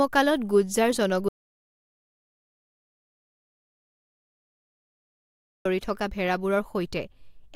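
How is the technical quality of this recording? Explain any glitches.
The quality is seriously compromised by one audio dropout to silence. From 1.29 to 5.65 s, the input was likely lost while recording continued, so the speech cuts abruptly to silence, with no room tone, for 4.4 s before resuming.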